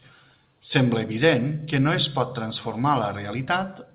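No technical faults are audible.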